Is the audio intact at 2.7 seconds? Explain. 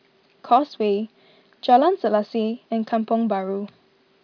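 Yes, at 2.7 seconds the speech is intact, with no dropout, click, distortion or other fault at that moment.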